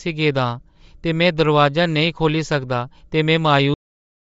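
Throughout, the speech has a breathy, grainy edge and nothing above 7.7 kHz, likely Bluetooth LC3 compression at a low bitrate, which fits around 32 kbps, discarding upper frequencies and filling the gap with noise. At 3.74 s the speech stops mid-sound and drops straight to digital silence with no decay. This is a cut-off end: the final buffers were never written or played.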